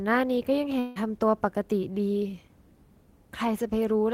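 Long network dropout in this speech recording, 0.79 to 0.99 s: the last sound smears into a fading buzz, then resumes with about 160 ms missing, likely from audio packets never arriving.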